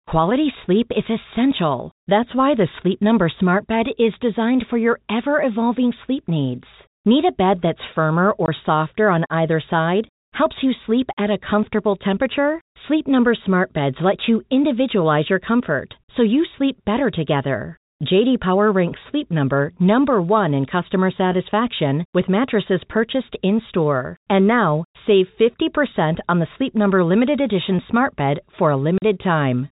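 Packet loss filled with silence cuts the speech twice: a 20 ms hole at 8.46–8.48 s, between "a bed that's firmer" and "softer on either side", and a 40 ms hole at 28.98–29.02 s, after "edition smart bed for". The gap lengths point to one and then two lost 20 ms packets replaced by silence. Each hole is a flat, silent stretch on the waveform and a blank column on the spectrogram. Its abrupt edges show as thin broadband streaks against the telephone band, which stops at 4 kHz.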